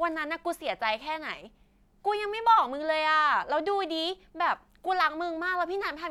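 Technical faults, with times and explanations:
None of this speech recording carries a technical fault. There is nothing here to time or to explain.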